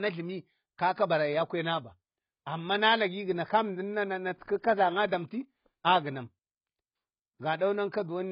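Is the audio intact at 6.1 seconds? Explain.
No. At 6.1 seconds the speech carries AAC compression damage, and it runs through the whole clip. Nothing reaches above 5.1 kHz, so the sound is dull, and sibilants smear into a warbling, fizzy texture. This is likely AAC-LC at a very low bitrate, consistent with about 16 kbps. Short of bits, the encoder lowered its cut-off and coarsely quantised the remaining frequency lines against its hearing model, leaving heavy smearing.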